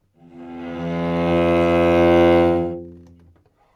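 No technical faults can be heard anywhere in this recording of sound. Nothing in its playback calls for comment.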